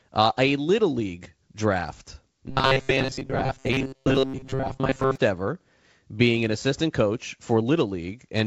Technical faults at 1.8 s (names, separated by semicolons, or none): none